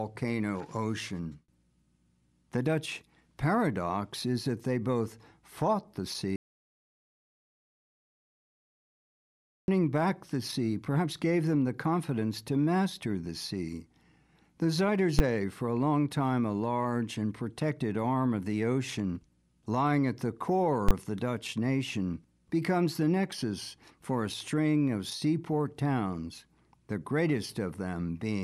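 Right after "they both fought the", at 6.36 s, the sound drops out to silence and doesn't return until 9.68 s, picking up again at "back the sea perhaps". That's an audio dropout to silence: about 3.3 s of silence, with no room tone at all. The likely cause is the input going away, say a lost connection or a mute, while recording carried on, so whatever happened in that stretch is simply gone.

Then there are two bursts of invalid numbers at full scale, where a calculation blew up and the samples got pinned to the maximum value. At 15.19 s, just before "for a long time", a single hard bang lasts about 11 ms, which fits a 512-sample block. At 20.89 to 20.91 s, between "ocean lying at the" and "of the", a second one runs about 21 ms, consistent with a 1024-sample block.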